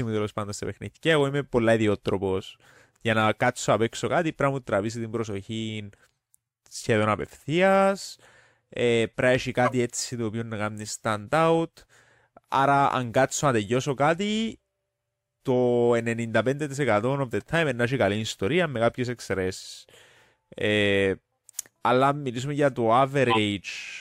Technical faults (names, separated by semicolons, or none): corrupt frame decoded